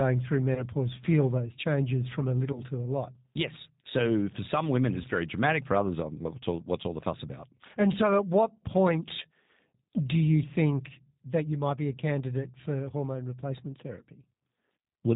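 G.729 coding, present for the whole clip, gives the speech a rough, slightly synthetic quality with plainly audible damage. The band ends at 4 kHz, which fits G.729A at around 8 kbit/s. This codec does not send the waveform. It sends the settings of a vocal tract filter and a pitch predictor, plus a handful of pulses for each 10 ms frame, and the decoder rebuilds the speech from those, so fine detail and air are lost.

VoIP packet loss concealed by the speech codec occurs at 0.55 to 0.65 s, 2.53 to 2.62 s and 5.02 to 5.07 s. Each gap fits a single lost 20 ms packet. With no data arriving, the decoder kept extending its last pitch and filter settings, so the sound stretches into a brief buzzy tone or coloured noise that fades. Because each frame builds on the one before, the speech stays weakened for a moment after packets resume, which makes each event last longer than the loss itself.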